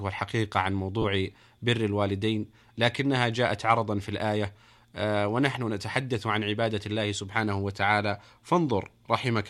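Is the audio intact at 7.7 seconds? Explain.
Yes, the speech at 7.7 seconds is intact, with no dropout, click, distortion or other fault at that moment.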